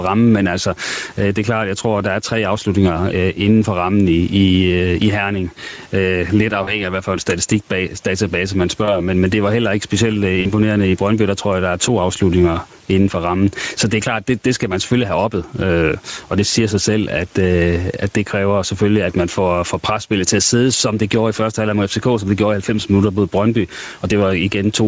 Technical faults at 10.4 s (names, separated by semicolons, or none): gain pumping; Speex codec; VoIP packet loss concealed by the speech codec